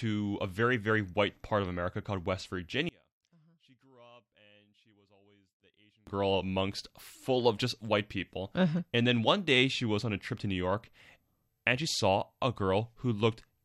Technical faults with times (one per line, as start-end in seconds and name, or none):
2.89-6.07 one channel inverted